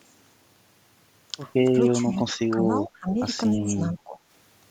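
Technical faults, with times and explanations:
2.01–2.1 s, 2.29–2.63 s, 2.86–3.08 s and 3.54–4.19 s: speech suppressed in double talk. The speech ducks in patches by roughly 15 dB, about 20 dB at 2.86–3.08 s, but never falls to full silence as a dropout would. The likely cause is an echo canceller that turned down the near talker while the far side was also speaking.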